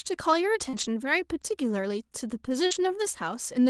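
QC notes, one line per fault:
0.69–0.75 s and 2.67–2.73 s, short concealed packet loss: a brief smear or wobble where about 40 ms of audio arrived too late to decode. The receiver extended the preceding sound for 34 ms and then 39 ms, then blended back into the real signal.
0.73–0.91 s and 2.71–2.77 s, lost packet rebuilt from error correction: no gap, but a rougher, noisier stretch of 100 ms and then 40 ms. The Opus decoder played low-bitrate copies carried in the following packets, which fits 20 ms frames, inside the call's 12 kHz, 32 kbps band.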